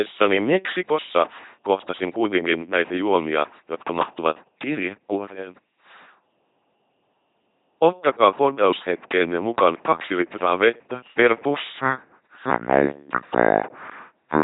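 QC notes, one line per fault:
throughout, LPC-10 vocoder: speech is rebuilt from a ten-pole filter excited by buzz or hiss, giving a heavy mechanical robot voice with nothing above 3.8 kHz, consistent with 2.4 kbit/s.
8.53–8.55 s, loud pop: a sudden voltage step, likely from a switch or driver glitch, adds a single sharp pop, about 5 dB above the speech, which continues underneath.
11.78–14.43 s, section at the wrong speed: right after "kaksi litraa vettä per" playback drops to 0.632 times normal, likely from a wrong clock, so speech turns slow and deep, about seven semitones lower.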